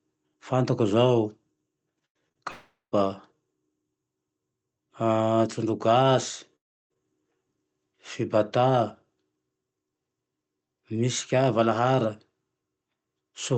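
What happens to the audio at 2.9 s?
Between 2.51 and 2.94 s the sound smears into a fading buzz, then silence, likely a long network dropout; unlike a brief glitch, audio resumes with content missing.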